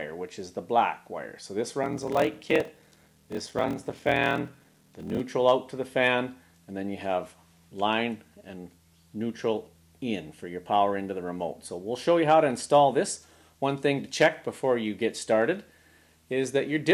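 A block size mismatch (padded) runs from 1.81 to 5.20 s. Each block is written shorter than the next stage reads, so every block ends in a short zero-filled gap, which fits 1024-sample blocks. These gaps repeat as a 41.7 Hz buzz, and the audio plays slower, at 0.889 times speed.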